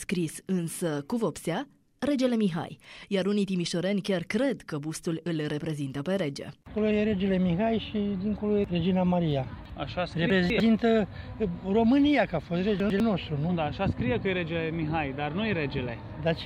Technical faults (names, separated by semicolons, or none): chunks out of order